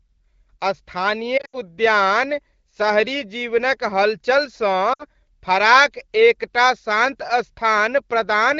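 Lost AMR speech frames at 1.37 to 1.56 s and 4.93 to 5.04 s: failed radio checksums made the decoder repeat its last pitch and vocal tract settings at falling gain. The first stretch warbles and fades through scattered gaps, the longest 80 ms. The second dips for 60 ms just before "फराक एकटा शान्त".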